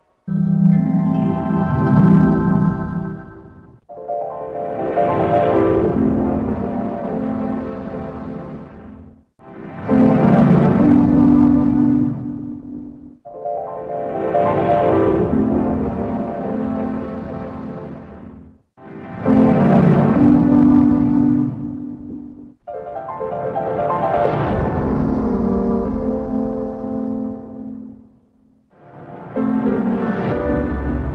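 Nothing goes wrong anywhere in this one, so there's simply no fault to point out.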